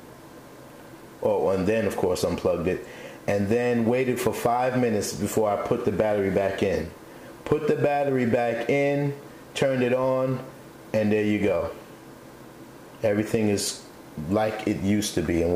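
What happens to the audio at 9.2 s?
Low bit depth without dither is present at 9.2 s, as it is for the whole clip. The sound was likely stored with too few amplitude steps and rounded to the nearest one with no dither to break up the error, a coarseness that fits an 8-bit signal. The rounding error tracks the sound itself, so at 9.2 s it comes across as a grainy, gritty distortion roughly 35 dB below the signal, harshest in the quieter parts.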